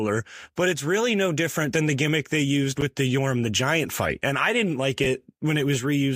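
At 2.78 s a brief jumbled flicker interrupts the speech, lasting until 2.82 s, and a shorter one follows at 5.04 to 5.06 s. Both are chunks out of order: a short piece of audio, which fits chunks of about 10 ms, plays after material that should come after it. In the first the piece lands roughly 30 ms late, in the second about 10 ms late. Nothing is missing, but the order is wrong, with hard joins around the misplaced piece.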